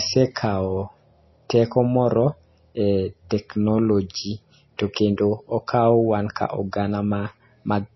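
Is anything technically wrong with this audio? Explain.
Yes. All the way through, this speech has heavy MP3 compression artefacts, likely from a low bitrate, one that fits around 24 kbps. Nothing gets through above 5.8 kHz, so it sounds dull, and dropped weak frequency lines flicker between frames, giving watery swirl and chirpy s sounds.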